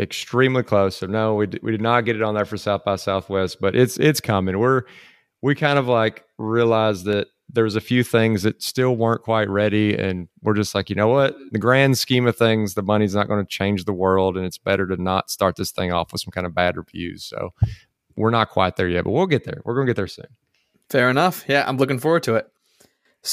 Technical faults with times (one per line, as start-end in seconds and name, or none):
7.13 dropped samples